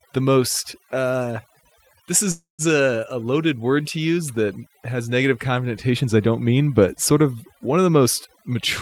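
The clip is speech, and overdone noise removal affects it throughout. Frequency bands near the noise floor are pulled far down, taking the quiet parts of the voice with them. The background drops and breaks up into twinkling specks. From 2.31 to 2.62 s there is a call audio freeze. The last sound stretches into a fading buzz or hiss, then about 150 ms of silence. Speech resumes where it stopped, with nothing lost. That adds 273 ms of delay, likely from held-up packets draining the jitter buffer. From 8.33 to 8.55 s, just after "of one of the", a jitter buffer speed-up occurs. Short pitch-period pieces are cut repeatedly, roughly 70 ms in all. The speech runs at 128% speed but keeps its pitch, so it sounds briefly hurried.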